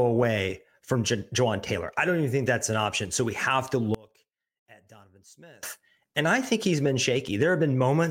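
A speech clip where, from 3.95 to 5.63 s, just after "we have to", the voice collapses by about 26 dB into a faint trace. The likely cause is one channel inverted, so the centred voice cancels when the channels are summed to mono.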